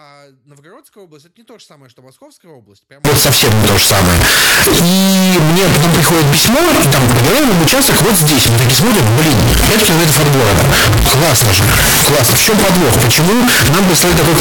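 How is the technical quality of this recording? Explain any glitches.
The recording is badly damaged from 3.05 s to the end. There, a signed and unsigned mix-up likely occurs. The 16-bit samples appear to be read with the wrong sign convention, which flips the top bit of each one. Every zero crossing then turns into a leap across the full range. The result is a very loud, harsh distortion. Quiet stretches become as loud as everything else.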